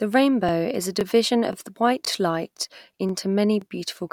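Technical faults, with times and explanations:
0.49–0.51, 1.01–1.03, 1.53–1.55, 2.05–2.07, 2.57–2.59, 3.09–3.12 and 3.62–3.64 s: overlapping chunks. The speech was handled in 0.5 s blocks, and each block begins about 21 ms before the previous one finished. That sliver plays twice at every join, with one join just before "is a" and another just after it. The result is a brief stutter or click roughly every half second, evenly spaced through the clip.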